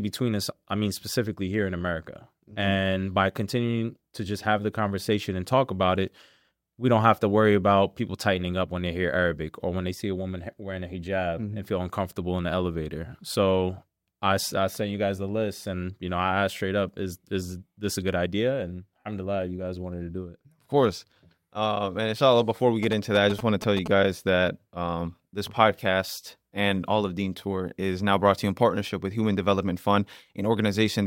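A burst of GSM signalling interference runs from 22.83 to 23.88 s. It sounds like a galloping dit-dit-dit of short buzzes at about 217 Hz, roughly 10 dB below the audio. A nearby 2G phone was signalling, and the audio circuit rectified its radio bursts.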